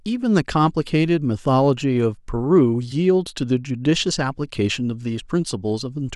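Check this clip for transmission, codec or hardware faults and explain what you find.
Nothing amiss turns up anywhere in this speech recording. There is no fault here to locate or explain.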